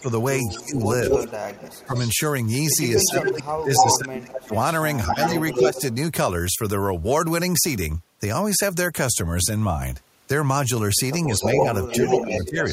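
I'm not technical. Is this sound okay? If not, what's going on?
No, there are two related problems, both from a call played on a loudspeaker.

First, speech suppressed in double talk: the voice dips, dulls or drops out in patches from 0 to 1.2 s, around 1.9 s, 3.1 to 4.5 s, 5.1 to 5.8 s and 11.3 to 12.7 s. The likely cause is the call's echo remover turning everything down when both sides spoke at once.

Second, echo leak: a repeat of the voice trails it by about a quarter of a second, nearly as loud as the original and at times just as loud, from 0 to 2.1 s, 3.0 to 5.9 s and 11.4 s to the end. It's likely a loudspeaker's sound reaching a microphone and getting sent back.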